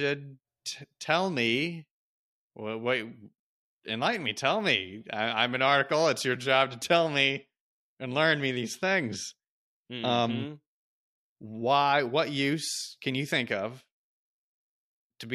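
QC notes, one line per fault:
No faults to note in this speech clip.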